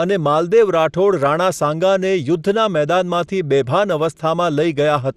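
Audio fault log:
Throughout: MP2 compression. The speech sounds dull and gurgling, with a granular roughness and upper bands that flicker in and out, and nothing above 14.4 kHz. This is likely MPEG Layer II coding at a low bitrate, around 80 kbps, starving sub-bands of bits.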